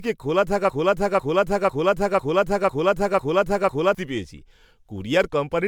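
Generation loss runs through the whole speech clip. The sound is swirly, smeared and hollow, with blurred attacks and nothing above about 19.9 kHz, more damage than a bitrate near 130 kbit/s would cause alone. This likely comes from around ten MP3 re-encodes, each quantising on a shifted frame grid.

A broken-record loop runs from 0.70 s to 3.95 s: a 0.50 s fragment repeats exactly, back to back, seven times. Something in the playback or streaming path likely stalled and kept resending its last buffered piece, so the audio belonging to that stretch is lost.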